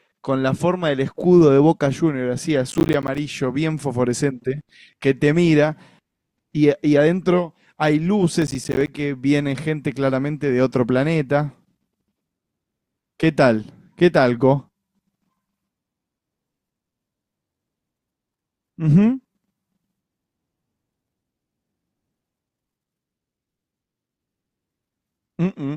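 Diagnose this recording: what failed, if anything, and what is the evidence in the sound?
Driver or buffer stage: processor overload crackle at 2.71–3.18 s and 8.36–8.88 s, where a string of roughly 10 ms buffers missed their deadlines and dropped to hard-edged silence.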